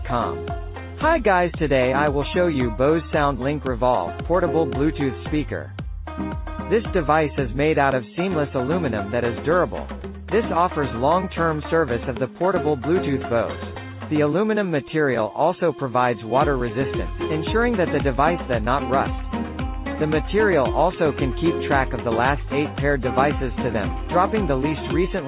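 No technical faults occur anywhere in the audio, so there is nothing to describe in time order.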